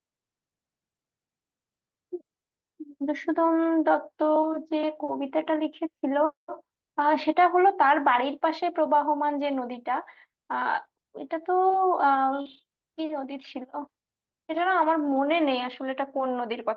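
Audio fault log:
12.41–12.47 s, short concealed packet loss: about 40 ms never arrived, so the decoder extended the preceding sound to fill it, leaving a brief smeared wobble.
12.45–12.59 s, lost packet rebuilt from error correction: 80 ms was replayed from low-bitrate backup copies, which fits four 20 ms packets, so there is no gap but the sound turns rougher and noisier.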